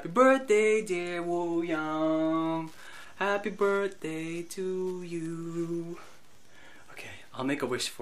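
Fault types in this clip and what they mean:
Wi-Fi interference: A nearby Wi-Fi radio's transmissions are being picked up and rectified by the audio circuitry, so each beacon the radio sends, every 102.4 ms, turns into a small audible click. The result is a faint, steady ticking just under ten times a second, sitting roughly 35 dB below the main sound and running evenly through the whole clip from start to finish.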